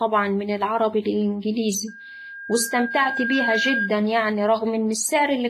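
Throughout the clip there is heavy transform-coding damage, likely WMA compression. The speech rings and smears, with a hiss that swells and fades with the signal, and nothing survives above 15.1 kHz. The long-block quantisation noise and zeroed weak components fit a low bitrate around 24 kbps.

From 1.87 to 3.94 s a loudspeaker feedback squeal takes over. A microphone hears its own loudspeaker, and at 1.6 kHz the loop gain exceeds one, so that tone grows over about a second and a half until it roughly matches the speech level.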